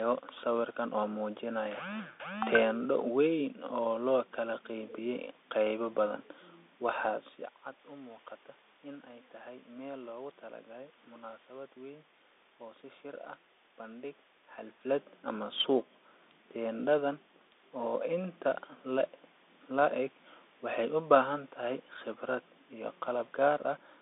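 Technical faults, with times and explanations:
Throughout, Bluetooth CVSD headset codec: the speech is squeezed into roughly 300 Hz to 3.6 kHz, with a grainy hiss underneath, and scratchy s sounds because the one-bit up-or-down coder can't keep pace with loud, fast high content. It all fits a 64 kbps CVSD link.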